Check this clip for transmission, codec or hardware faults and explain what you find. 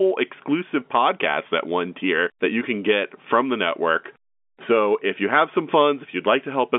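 Nothing wrong found: the speech is band-limited to a telephone line, about 200 Hz to 3.5 kHz with nothing above 3.7 kHz, which fits G.711 A-law coding working as it should.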